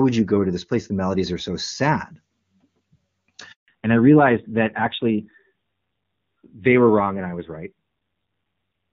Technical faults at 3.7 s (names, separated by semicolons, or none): handover gap; fallback to narrowband